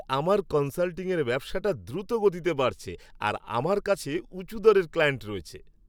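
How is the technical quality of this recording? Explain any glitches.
No glitches or technical faults can be heard here.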